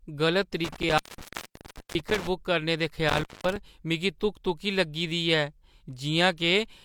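A speech recording with two episodes of intermittent contact, consistent with a loose cable or plug briefly opening the signal path. Between 0.64 and 2.29 s the line is open for about 970 ms in total, so the speech drops out or breaks up across that span. A second, shorter episode runs from 3.09 to 3.56 s, with about 209 ms open. Each break carries crackle at its edges as the contact makes and loses connection.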